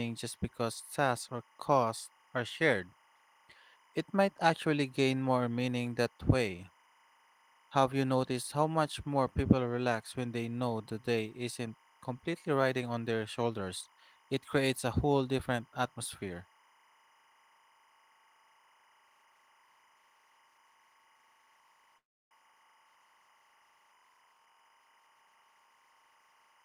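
Timecode bleed runs through the whole recording. Linear timecode at 25 frames per second is leaking in from an adjacent track or cable, and its square wave flips between tones near 1 kHz and 2 kHz. The result is a faint chirping warble, roughly 35 dB below the speech, sitting steadily behind it.

From 21.97 to 22.33 s there is a call audio freeze. Packets were likely held up in transit, emptying the jitter buffer. The receiver stretches the last sound into a brief fading buzz and then goes silent for about 310 ms. Speech then resumes where it stopped, 335 ms late, with nothing lost.

Between 24.03 and 25.84 s a jitter buffer speed-up catches up on built-up delay. The receiver repeatedly trims tiny pitch-period slices, removing about 300 ms in total. Speech runs at 118% speed with unchanged pitch and sounds noticeably hurried.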